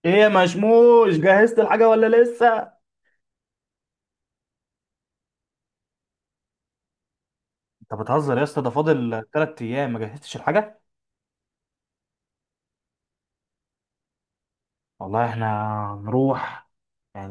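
Speech recording with no audible technical faults anywhere in the signal.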